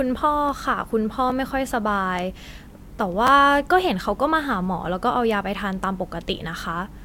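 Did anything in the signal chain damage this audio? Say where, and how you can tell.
Yes, at the driver or buffer stage. Two repeated-buffer events occur, at 1.3 s and from 3.27 to 3.29 s. The first plays the block once more. The second is slightly longer, as one short block plays three times in a row with a hard join at each repeat. The repeat length fits a 10 ms buffer. New samples arrived late, so the output replayed its last block, apparently without dropping any audio.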